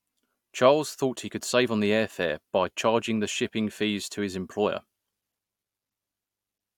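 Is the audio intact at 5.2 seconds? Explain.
Yes, the audio is intact at 5.2 seconds, with no audible fault in the speech at that moment.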